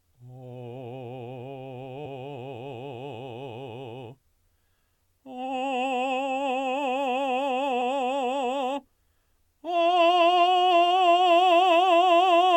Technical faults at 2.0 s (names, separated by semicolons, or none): compressed frames skipped